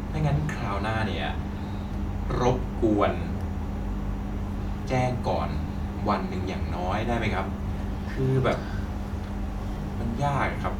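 No technical faults can be heard anywhere in the recording; the speech signal holds steady throughout, with no interruptions, level disturbances or added noise.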